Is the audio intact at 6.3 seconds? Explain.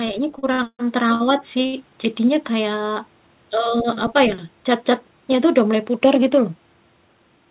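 Yes, the speech at 6.3 seconds is intact, carried through the call path with the narrowband sound of G.711 mu-law coding and nothing above 4 kHz.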